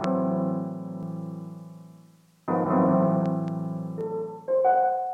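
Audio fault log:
1.03–4.01 s, doubled audio track: a second, full-band copy of the sound trails the original by roughly 200 ms at about the same level, so every onset is heard twice, like a flat slapback with no decay or room colour behind it. It cuts in and out abruptly at those times, likely from a second, slower capture path or an edit leaving two copies out of step. On a spectrogram each event appears as an identical pair spaced 0.2 s apart; the waveform shows duplicated envelopes.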